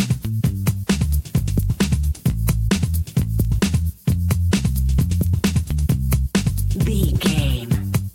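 Nothing stood out on listening to this audio.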